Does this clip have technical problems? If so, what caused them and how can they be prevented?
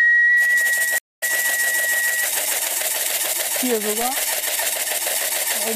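Yes. A stream reconnect at 0.98–1.23 s: the connection dropped, leaving about 0.21 s of silence, and a fresh decoder resumed roughly 0.2 s further into the stream. Larger client buffering and automatic retry with seamless resume prevent it.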